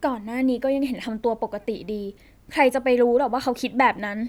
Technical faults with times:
none

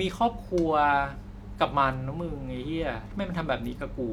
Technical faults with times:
none

